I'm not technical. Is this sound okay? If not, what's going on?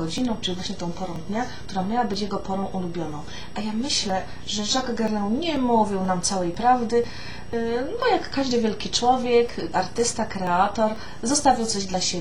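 No. From about 0.18 s to 11.94 s there are periodic USB or driver dropouts. Every 0.49 s, roughly a hundredth of a second of audio is skipped, around thirty times. This is heard as steady ticks wherever sound is playing.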